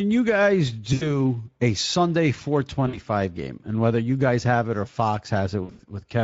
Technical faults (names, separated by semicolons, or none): Speex codec; VoIP packet loss concealed by the speech codec